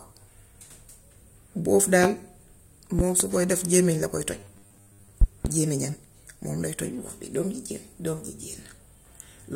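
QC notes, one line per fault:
2.04–2.07 s, loud pop: a single sharp pop, peaking about 20 dB above the speech, which keeps going underneath. It's likely a voltage spike from a plug, switch or static getting into the chain.
2.99–3.24 s, loud pop: two pops in quick succession, about 15 dB over the speech. It's likely another electrical transient.
4.40–5.11 s, robotic sound from repeated short buffers: the speech turns into a stiff metallic buzz at 100 Hz that still loosely tracks the talking. It's likely a starved audio stream replaying its last 10 ms chunk over and over, with most of the real audio skipped.
5.21–5.48 s, loud pop: a double pop at about 20 dB above the speech, right after the buzzy stretch. It's likely a glitch or switching transient on the line.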